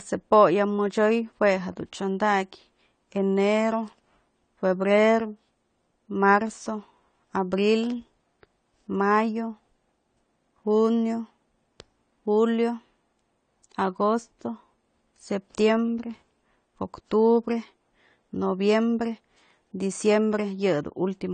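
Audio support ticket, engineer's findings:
AAC compression throughout, likely cause: speech dull and smeared, nothing above 9 kHz, fizzy sibilants, plainly audible. Coarse spectral quantisation fits low-bitrate AAC-LC, around 32 kbps.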